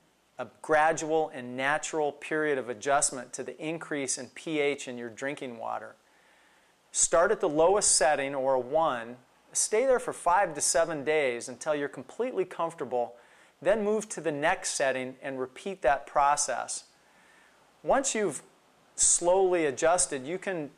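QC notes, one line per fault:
Nothing to flag here; I listened all the way and didn't hear a single fault in the sound.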